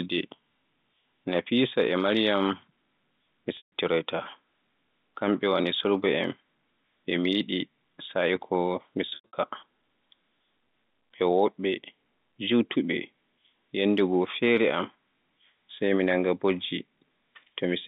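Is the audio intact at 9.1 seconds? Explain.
No. Between 9.09 and 9.33 s there is packet loss with pitch repetition: about 180 ms of audio went missing in several gaps spread over 240 ms, the longest run being 90 ms, which fits roughly six lost 30 ms packets. To bridge each hole, the receiver repeats the last pitch period and fades it out over about 50 ms, so the shorter gaps sound like a briefly held, buzzy tone. The 90 ms gap outlasts that fade, so it drops into silence before the speech returns through a short cross-fade.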